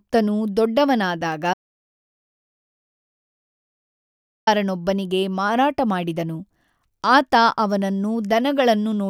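An audio dropout to silence runs from 1.54 s to 4.47 s, removing close to 2.9 s of the speech. The sound stops abruptly mid-flow and resumes just as suddenly, and the gap between is dead digital silence with no room tone or noise floor at all. That points to the input signal vanishing while recording carried on writing silence, most likely from a momentary disconnect, a dropped link or an accidental mute.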